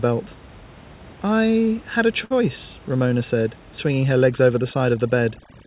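Just after "I had a", at 2.24 s, a short stall from a late packet holds the sound for about 64 ms until 2.32 s. The jitter buffer ran dry and the receiver stretched the last sound. Unlike a lost packet, nothing is skipped; the sound briefly drags with a faint buzz or dip.

From 3.87 s to the end, overdone noise removal takes hold. Bands near the room noise, about 24 dB below the speech, are switched off, so the background drops and breaks up into twinkling specks. This is unlike the steady, dull cut above 4 kHz of the G.711 call path.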